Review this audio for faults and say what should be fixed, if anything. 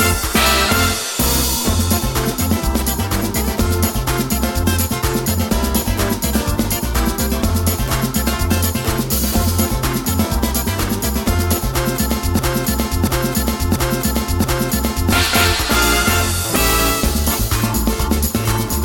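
From 12.39 s to 15.12 s the same 0.68 s fragment plays four times back to back, and whatever should have filled those seconds is lost. This broken-record loop is likely a stalled player, encoder or stream re-sending its last held fragment. Watching the feed for stalls and falling back to silence instead of replaying a stale buffer would prevent it.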